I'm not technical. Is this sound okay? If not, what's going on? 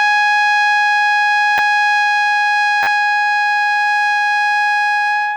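No. This music has two glitches, both a repeated buffer: new audio arrived late, so the player replayed its last tiny slice. At 1.58 s you get a quick click. From 2.83 to 2.87 s, a 10 ms slice repeats four extra times, making a brief buzzy stutter.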